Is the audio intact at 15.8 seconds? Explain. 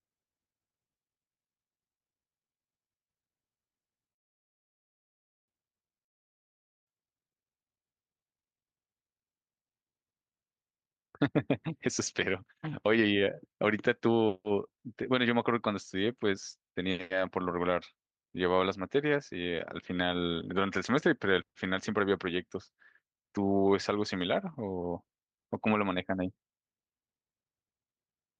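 No. At 15.8 s the clip is inside a jitter buffer speed-up running from 10.71 s to 16.9 s. The receiver's buffer had built up more audio than its target, so it repeatedly cut out short slices one or a few pitch periods long, dropping roughly one and a half seconds in all. The speech therefore plays at about 121% speed with its pitch unchanged, sounding hurried across that stretch.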